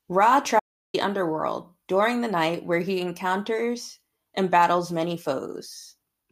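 The input feed was likely interrupted, by a disconnection, a failed link or a stray mute, while recording carried on writing silence. From 0.6 s to 0.94 s the speech drops out to total silence with no room tone, losing about 0.34 s before "underworld during the night".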